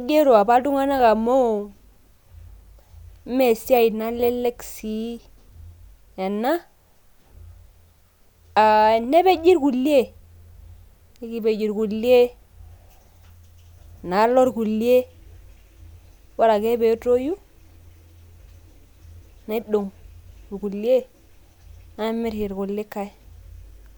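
Speech recording, with nothing technically wrong to be heard in it. No fault turns up at any point in the audio.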